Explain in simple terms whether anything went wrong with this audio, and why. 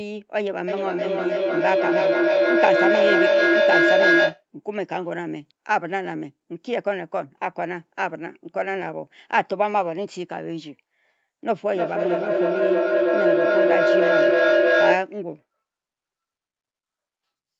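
Two things went wrong, both from two devices on the same call in one room. From 0.68 to 4.45 s there's feedback echo between two devices: one device replays what the other's microphone sent, that mic catches it again, and each bit of speech comes back roughly every third of a second, stacking up rather than fading.

Then from 11.56 to 15.12 s it tips into a feedback howl. The loop gains level on every pass, so the repeats grow and narrow into a mid-pitched tone around 700 Hz until it stops.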